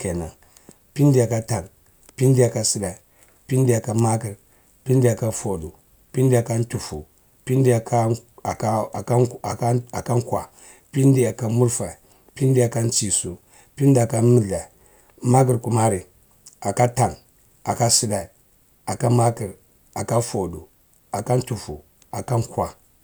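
No technical faults can be heard anywhere in the speech recording, and the signal stays intact and continuous throughout.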